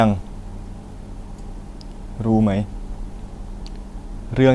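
No technical faults can be heard anywhere in the speech recording.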